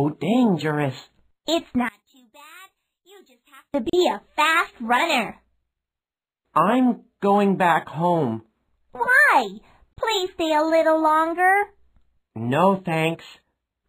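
Between 1.89 and 3.74 s the audio drops by about 28 dB into a faint remnant, as though its centre has been removed. The likely cause is one channel inverted: with one stereo side's polarity reversed, everything common to both channels cancels when summed to mono. At 3.90 s and again at 9.93 s the sound breaks off into a brief silence of about 37 ms and 34 ms, then resumes exactly where it stopped. These are gaps at a join of encoded pieces, six seconds apart, which fits the audio having been encoded in 6 s pieces and joined without removing each run's start-up delay and final-frame padding.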